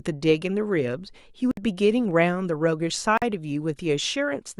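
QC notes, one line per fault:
1.51–1.57 s and 3.17–3.22 s, Bluetooth stall: the speech drops to silence for about 60 ms and then about 44 ms, and resumes where it left off rather than being overlapped or smeared. The abrupt gap with a clean restart points to the wireless receiver's playback buffer running empty. The likely cause is radio interference delaying packets, so output paused until retransmitted audio arrived.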